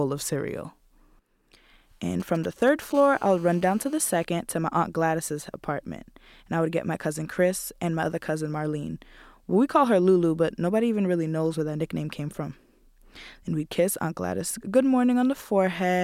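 GSM signalling bursts run from 2.20 to 2.93 s: a galloping dit-dit-dit of ticks and short buzzes sitting roughly 20 dB below the speech. A 2G handset close to the recording chain is sending brief clusters of radio bursts, the pattern it uses while setting up a call or message, and some stage in the audio circuit rectifies those pulses. Each cluster leaves a burst of 216.7 Hz buzz unrelated to the speech.

GSM phone buzz follows almost at once, from 2.95 to 4.25 s, as a hard, raspy 216.7 Hz buzz with a dense stack of harmonics, about 27 dB below the speech. Its steadiness points to the same handset now transmitting continuously, as it does during a call, firing a radio burst 216.7 times a second that the audio electronics demodulate into a constant rasp laid over the speech.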